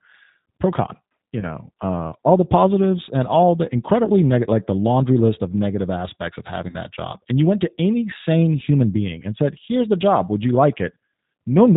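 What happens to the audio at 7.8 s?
At 7.8 s, as throughout, the speech carries G.729 codec damage: rough, synthetic and cut off above 4 kHz, consistent with 8 kbit/s pulse-excited coding rather than simple band-limiting.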